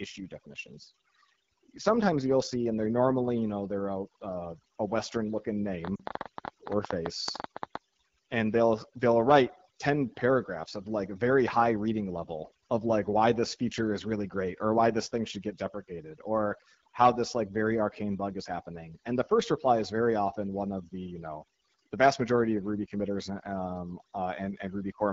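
From start to finish the speech carries overdone noise removal: the noise suppressor was set so aggressively that any frequency band sitting near its noise estimate is pulled down or switched off, taking quiet speech detail with it. The result is a near-silent background dotted with twinkling specks. On a spectrogram the background looks almost black, with scattered isolated bright dots and ragged, hollowed-out speech harmonics.

The whole clip also passes through the AMR wideband (HD Voice) codec at a low rate, with damage that is plainly audible; the roughness fits a rate around 8.85 kbit/s. The codec models speech up to 6.4 kHz and fills in above that with shaped noise, so the voice sounds raspy and gritty. A spectrogram shows smeared harmonics and a noisy, textureless band from 6.4 to 7 kHz with nothing above 7 kHz.

From 5.85 to 7.76 s, ending just before "and they'll they'll write", a train of clicks ticks over the sound at about 11 per second, irregularly spaced, roughly twenty in all and around 15 dB above the speech. 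It is likely interference from nearby equipment or a faulty connection. The waveform shows sharp, similar spikes; the spectrogram shows thin vertical lines across all frequencies.

Within that stretch, from 5.96 to 6.02 s, lost AMR speech frames cause a gap of 40 ms, which fits two consecutive frames failing their checksum. The decoder reuses the last pitch and vocal-tract settings at falling gain, heard as the sound dropping to near silence within the two frames. In the waveform the amplitude sags briefly, and on the spectrogram the harmonics freeze and fade before recovering.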